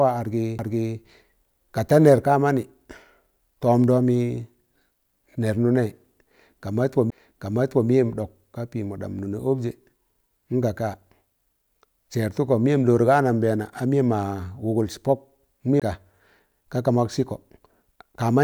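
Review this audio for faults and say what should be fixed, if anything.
CD skips occur at 0.58 s, 7.1 s and 15.80 to 15.82 s. At each, the laser lost its track and landed on another turn of the disc's spiral, so the player muted briefly (a few milliseconds at first, then about 15 and about 20 ms) and resumed elsewhere in the speech. Unlike a plain dropout, which picks up where it stopped, each tick here leaves the speech discontinuous. Re-rip the disc from a cleaned copy using secure, error-checking extraction on a vibration-free drive.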